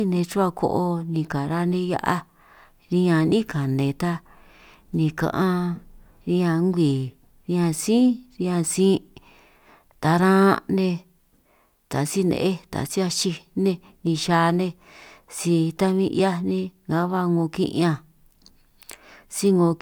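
Listening to the speech recording, nothing stood out as a technical problem at any point.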